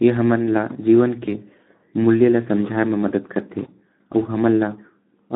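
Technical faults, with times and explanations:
Throughout, Speex codec: the speech sounds hoarse and noisy, confined to a narrow band from about 150 Hz to 3.7 kHz. Speex is a CELP codec that models the voice as a filter driven by a coded excitation. At a setting that fits around 11 kbps, the excitation gets too few bits to carry the voice's fine detail, so the coding noise stays plainly audible on every stretch of speech.
1.25 to 1.29 s and 3.63 to 3.69 s, VoIP packet loss concealed by the speech codec: each spot has a brief smeared blur where the voice stretches and fades instead of continuing cleanly. The sound points to one lost 20 ms frame each time. The decoder filled the gap by repeating its last pitch and filter at falling gain. Because each frame builds on the last, the distortion lingers for tens of milliseconds after audio resumes.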